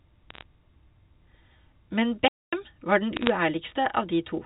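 Bit errors on a digital phone line put brief crackle into this narrowband telephone speech, which carries nothing above 4 kHz, from 0.30 to 0.43 s and again from 3.17 to 3.30 s. Roughly three bits in a thousand flip, each corrupting a single sample. A playback stall at 2.28 s cuts the sound dead for 245 ms until 2.53 s, likely because the player ran short of data or its thread was blocked.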